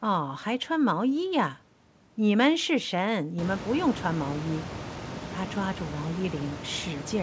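No technical faults are audible in this speech.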